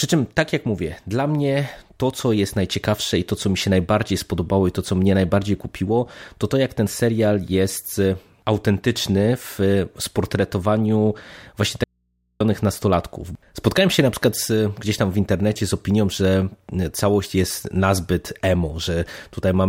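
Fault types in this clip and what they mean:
Audio dropout to a faint residue: The speech cuts out abruptly at 11.84 s and returns at 12.40 s, a gap of about 0.56 s. The signal does not fall silent. Only a low mains hum remains, roughly 50 dB below the normal speech level. The break is sudden at both ends, with no fade, so it does not sound like a natural pause. The likely cause is a brief loss of the wanted signal while the input stayed open.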